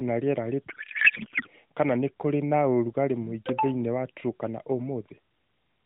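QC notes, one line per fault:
0.70–1.48 s, codec payload misread: after "na rĩera" speech turns to garbled warble until "kana nĩ kũrĩ na"; octet-aligned AMR frames unpacked as bandwidth-efficient, fields shifted.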